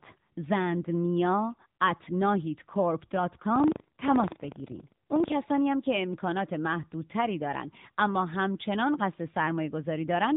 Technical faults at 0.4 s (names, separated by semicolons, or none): AMR narrowband mobile codec